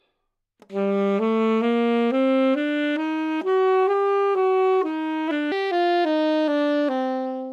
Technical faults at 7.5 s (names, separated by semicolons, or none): section at the wrong speed